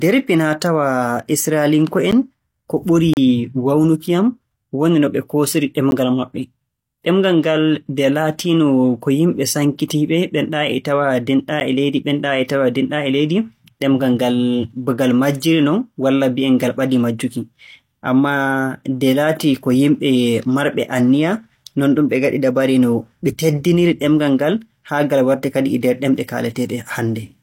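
Short ticks break into the speech at 2.11 s, 5.91 s and 11.6 s, with a longer hole from 3.14 to 3.17 s. Each is a block of digital silence. The speech drops straight to silence and returns with no fade. The three 11.61 ms gaps fit a 512-sample buffer that went unfilled in time. The 3.14 s hole lasts 34.83 ms, long enough to hear as a brief dropout rather than a tick.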